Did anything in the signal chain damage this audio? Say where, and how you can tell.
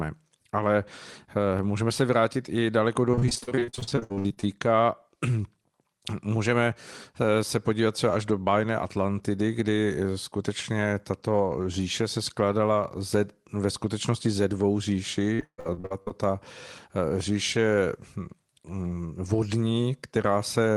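Yes. At 1.59 s the converter or input stage shows a DC step. The waveform's zero line jumps and is heard as a single low thump while the speech carries on. The offset then drains away as a high-pass of about 2 Hz pulls it back.

On the network side there is repeated packet loss (robotic sound) from 3.11 to 4.45 s and from 15.35 to 16.12 s. In each stretch roughly half the audio is concealment filling short holes, 25 in the first and 9 in the second, up to 138 ms long. That gives choppy speech with pieces missing. The path runs through the Opus call codec, whose 12 kHz top end fits a 24 kbps setting.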